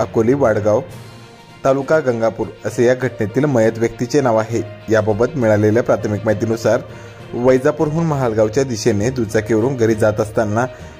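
No technical faults occur at any point in the audio, so there is nothing to describe in time order.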